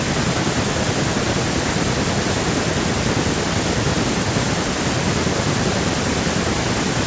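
There are no technical faults to describe in time order in this speech, which has simply passed through a call's microphone processing with nothing above 8 kHz.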